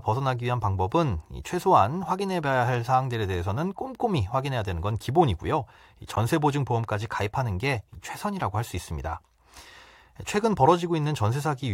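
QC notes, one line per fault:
6.16 s, gap between stream segments: a hard-edged hole of about 13 ms of silence where two segments' timestamps don't quite meet; no audio goes missing.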